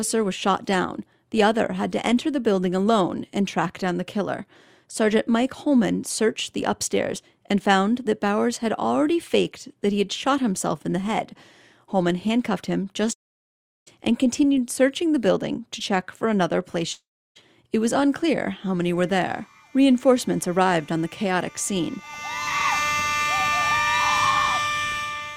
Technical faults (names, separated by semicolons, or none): long network dropout